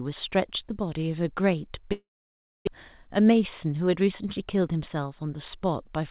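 It's a speech clip that came over a call path where nothing gets above 4 kHz, which fits G.711 A-law at 64 kbps, and two things go wrong. From 1.92 to 2.69 s the sound gets smeared into a fading buzz and then drops to silence for about 620 ms. That's likely a long network dropout: the receiver kept stretching the last bit of audio, then gave up, and about 600 ms of the actual speech never comes back. The stream resumes later with roughly 150 ms more delay built up. Then from 2.88 to 4.77 s the speech runs about 7% fast without any pitch change, which is the jitter buffer speed-up. The receiver trims tiny pitch-period-sized slices over and over to claw back that extra backlog, around 150 ms in total, so that stretch sounds a bit hurried.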